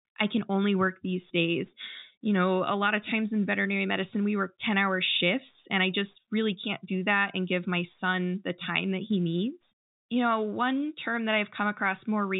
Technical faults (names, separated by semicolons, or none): none